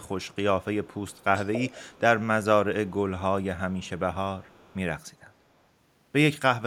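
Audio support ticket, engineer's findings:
Echo leak in the speech. Delayed copy of the talker trails by 284 ms. Faint scraps, very low, near 0.04–0.36 s, 2.88–2.94 s, 3.78–3.99 s and 4.41–4.76 s. Stronger stretch 0.84–2.0 s, only about 15 dB under the voice. Likely component: far-end echo canceller on a loudspeaker device. Mic picks up playback, canceller fails to subtract it, residue returns down the line.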